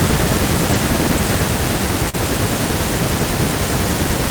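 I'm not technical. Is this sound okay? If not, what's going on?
No. There are two brief glitches in this speech clip.

At 0.73 s there is a lost packet rebuilt from error correction. A tiny piece of the call, about 20 thousandths of a second, failed to arrive. The piece sent right after it carried a rough backup copy, and the receiver played that copy. So there is no silence, but that instant sounds grainier and noisier than the speech around it.

From 2.09 to 2.15 s there is a short concealed packet loss. About 40 thousandths of a second of the call arrived too late to use, and no backup copy was available. The receiver covered the hole by stretching the sound it had just played, then blended back into the real audio. You may hear a quick smear or wobble, and a short sound could drop out.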